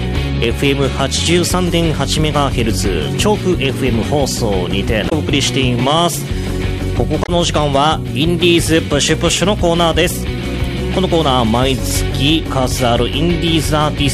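At 5.06 to 5.13 s and again at 7.22 to 7.29 s, damaged data in the compressed stream produces a brief 70 ms disruption in the sound. The corrupted bytes make the decoder misread those frames, lose sync, and resume only once it finds the next valid frame header.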